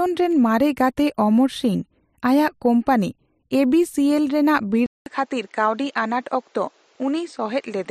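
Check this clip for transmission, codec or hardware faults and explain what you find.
One fault is audible. At 4.86 s the sound drops out for 200 ms and then continues duller and a few decibels quieter to the end, with nothing above 8.7 kHz and a new, faint background noise. The likely cause is an input switched to a poorer device, whose narrower band, level and noise floor replace the original microphone's.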